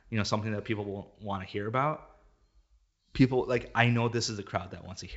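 No faults: the speech is carried over G.722 wideband telephone coding at 64 kbit/s, with nothing above 7.7 kHz and at most a faint trace of coding damage, which is how that path is expected to sound.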